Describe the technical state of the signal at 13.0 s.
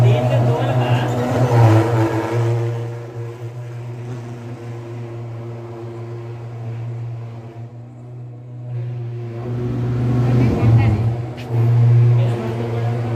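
At 13.0 s the signal is intact, with no audible fault.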